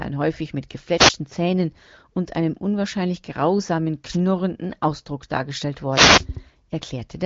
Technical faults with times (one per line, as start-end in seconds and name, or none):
0.93-1.15 wireless microphone noise hit
4.08-4.18 wireless microphone noise hit
5.90-6.26 wireless microphone noise hit